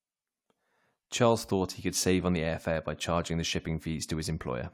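Nothing technical goes wrong anywhere in this bit of speech, so there's honestly no fault to point to.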